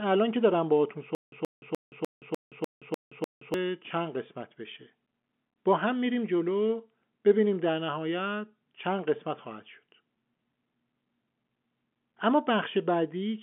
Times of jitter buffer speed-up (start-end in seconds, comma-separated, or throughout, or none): none